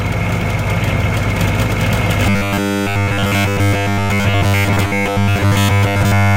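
From 2.27 s to the end at 6.37 s, the likely cause is that fresh audio stopped arriving in time, so playback kept looping its last short buffer instead of moving forward. Nearly all of this stretch is repetition rather than new material. The result is robotic sound from repeated short buffers: a rigid, metallic buzz locked at 100 Hz, which fits a loop of about 10 ms, with the original sound only loosely traced underneath.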